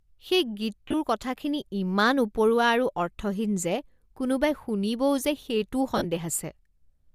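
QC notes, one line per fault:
0.87–0.94 s and 5.97–6.05 s, lost LE Audio frames: brief noisy smears break up the speech just before "কথাখিনি ইমান উপৰুৱা আৰু" and again near 6 s. About 53 ms and 60 ms dropped out in bursts up to about 30 ms. The decoder, likely LC3 with 7.5 ms frames, filled each gap with the last spectrum under random signs.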